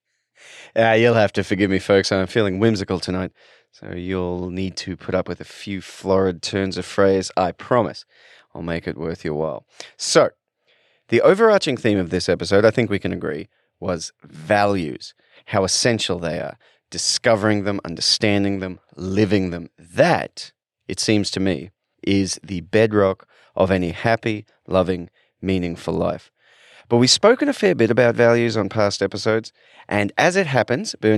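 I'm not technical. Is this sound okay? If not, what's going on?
Yes, this sound is okay; nothing is going wrong in it.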